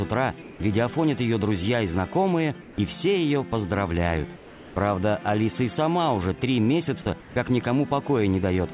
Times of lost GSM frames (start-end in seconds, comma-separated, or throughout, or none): none